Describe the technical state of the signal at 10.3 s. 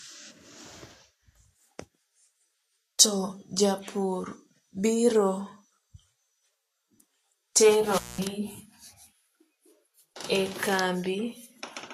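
At 10.3 s the speech sounds hissy and grainy, with nothing above 14.2 kHz and the treble dissolving into noise of matching energy. This is likely Vorbis compression at a low rate, around 30 kbps. Unlike broadband noise, the grain tracks the speech itself.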